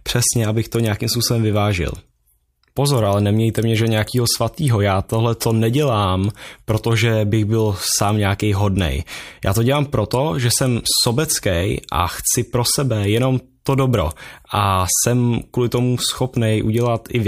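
Speech, with no technical faults.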